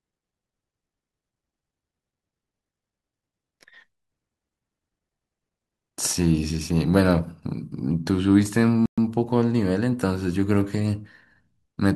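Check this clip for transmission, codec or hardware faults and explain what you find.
One fault is audible: a playback stall from 8.86 to 8.98 s. The speech cuts out mid-flow into silence for about 120 ms, most likely because the player briefly ran out of buffered data or its thread was held up.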